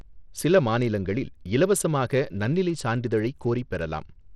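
Start to finish, the speech has flickering, dropped-out treble and a gritty aliased grain, likely Bluetooth SBC compression, which fits a starved link around 80 kbps.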